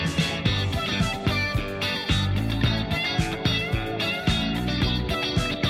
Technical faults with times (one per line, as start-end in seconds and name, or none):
none